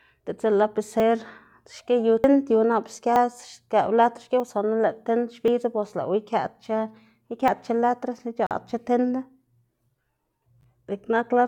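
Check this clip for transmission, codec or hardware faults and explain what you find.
Two kinds of fault are present: six skips from dropped buffers and one brief Bluetooth stall.

Dropped buffers (overrun) occur at 1.0, 2.24, 3.16, 4.4, 5.48 and 7.48 s. The one at 3.16 s comes just after "nap ske". Each is a sudden jump forward in the speech. No gap is heard. Most skip about 40 ms. The 3.16 s skip loses about 70 ms, and the 2.24 s skip about 100 ms. The likely cause is buffers being overwritten before they were read, so the two sides of each loss are joined directly.

A Bluetooth stall runs from 8.47 to 8.51 s. The speech cuts to 43 ms of silence and then resumes. This is likely a wireless link holding up packets. The headphone buffer ran empty, and playback waited until the delayed audio arrived.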